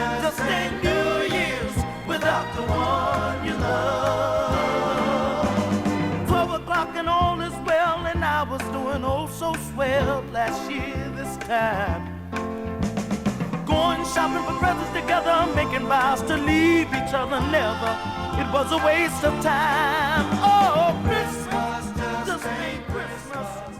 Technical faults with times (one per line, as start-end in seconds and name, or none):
none